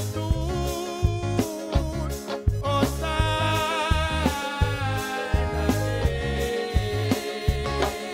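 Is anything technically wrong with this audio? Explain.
Yes. Computer activity noise runs throughout: processor or graphics load shifting the shared audio ground, heard as a chirping buzz near 1 kHz, roughly 30 dB below the signal.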